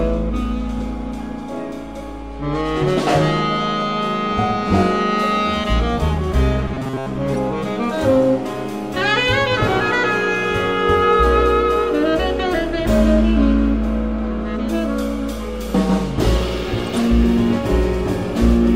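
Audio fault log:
6.68–7.07 s, robotic sound from repeated short buffers: a rigid, metallic buzz at 133 Hz replaces the sound. Most of it is likely one repeated stretch of about 7.5 ms.
7.34–7.38 s and 16.87–16.97 s, corrupt frame decoded: damaged compressed frames were played anyway. This puts energy at wrong frequencies for a couple of frames, then several.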